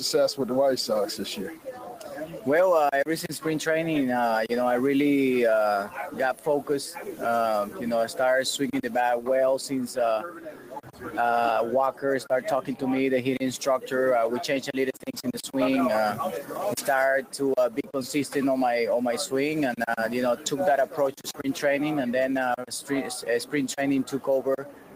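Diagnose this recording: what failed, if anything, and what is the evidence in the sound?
What failed is call processing: a speech-oriented noise suppressor was left running across the whole clip, so we've got a noise suppressor applied to non-speech sound. It's treating the sustained, steady parts of the audio as noise and pulling them down, with the gain riding up and down by roughly 10 dB. That's what gives the sound its pumping, unsteady feel: onsets punch through fine, but anything held sinks back a moment later.

The clearest evidence is the stretches where the suppressor turned the sound down hardest: 1.41–2.47 s, 5.87–7.83 s, 10.25–12.83 s, 14.93–17.96 s, 20.36–21.5 s, and 22.57 s through to the end. In each one the level drops about 10 to 11 dB at its deepest, and up to about a second of each window gets chewed. The gate is classifying sustained or decaying sound as background and ducking it, so tails get clipped short while transients survive.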